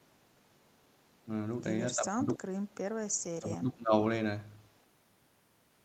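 From 1.96 to 2.48 s, and again from 3.39 to 3.94 s, the speech drops sharply, by something like 20 dB at its deepest, for roughly half a second each time. That's speech suppressed in double talk, most likely. When both ends talked at once, the echo canceller probably couldn't tell this talker apart from the returning loudspeaker echo, so it pulled the level down on everything and left these two dips.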